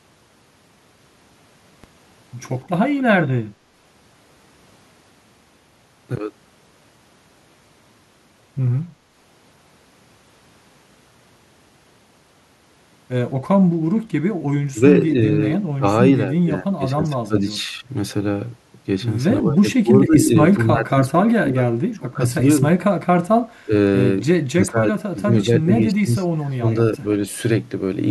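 At 1.84 s a DC step shifts the zero line, heard as one low thump. The offset then holds to the end, unlike a transient click that leaves no shift.

The speech then dips or breaks up by up to about 25 dB at 14.71 s, 15.54 s, 16.33 to 17.89 s, 19.42 to 22.64 s, 23.64 s, 24.5 to 26.67 s and 26.98 s. This is likely speech suppressed in double talk.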